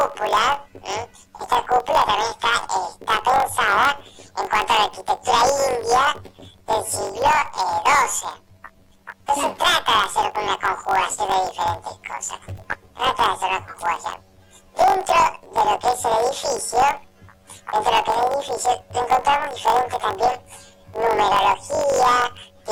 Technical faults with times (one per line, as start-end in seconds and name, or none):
0.00-22.71 planar audio read as interleaved